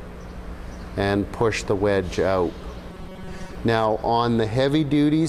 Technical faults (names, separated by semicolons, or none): robotic sound from repeated short buffers